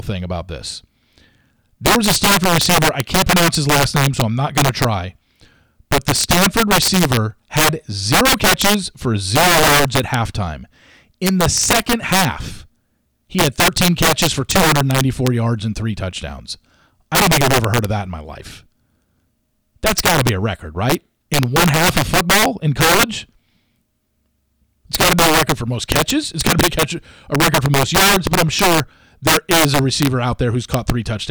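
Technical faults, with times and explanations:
Throughout, integer overflow: the speech is driven about 10 dB past full scale, and instead of being limited, a few percent of samples wrap to the opposite sign. This gives violent cracks on loud syllables, seen as full-height vertical jumps on the waveform and broadband vertical streaks on the spectrogram.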